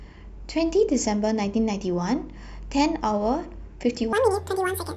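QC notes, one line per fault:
4.13–4.96 s, section at the wrong speed: the closing stretch of speech runs at 1.79 times its recorded rate, so tempo and pitch rise together, hurried and about ten semitones higher, with an abrupt switch at the onset, likely from being played against the wrong clock.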